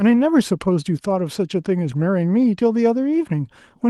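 From 1.91 to 2.01 s, a lost packet rebuilt from error correction: roughly 60 ms of the stream, which fits three 20 ms Opus packets, was missing and was replaced by the low-bitrate copies carried in the packets that followed. There is no gap, but the speech turns briefly rougher and noisier. On a spectrogram the harmonics smear and fill with grainy noise for that span. The waveform stays continuous, and the band edge near 12 kHz from the call codec holds steady.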